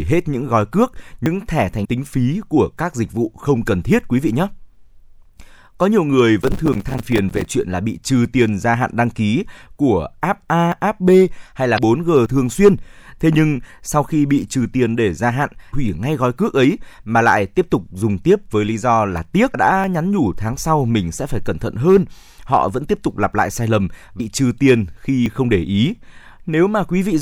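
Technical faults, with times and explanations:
1.26, 10.72, 12.26, 19.84 s (just before "nhắn nhủ tháng sau") and 25.26 s, dropped buffer (overrun): the sound jumps forward with no gap, losing around 70 ms at 1.26 s and around 20 ms elsewhere, likely because samples were overwritten before being collected.
1.81–1.86, 11.74–11.79, 15.69–15.73 (between "tiền để gia hạn" and "hủy ngay gói cước"), 19.51–19.55 (after "lý do là tiếc") and 24.16–24.21 s, damaged data in a compressed stream: brief chirps or blips of about 40–50 ms where corrupted frames are misread and the decoder resynchronises.
6.42–7.51 s, processor overload crackle: a gritty tearing rides on the speech for about a second as roughly fifty buffers of around 5 ms each miss their deadline, each leaving a tiny hard-edged silent gap.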